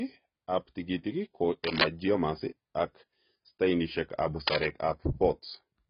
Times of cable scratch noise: 1.64-1.85, 4.47-4.66

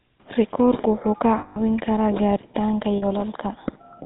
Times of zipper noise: none

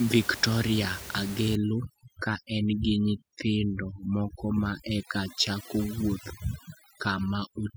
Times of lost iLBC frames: none

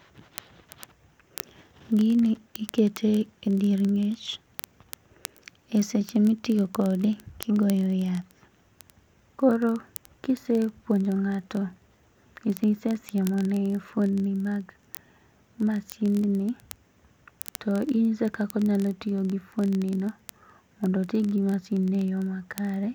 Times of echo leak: none

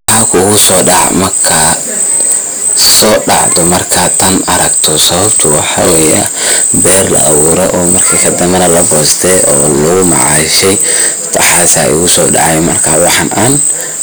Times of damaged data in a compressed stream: none

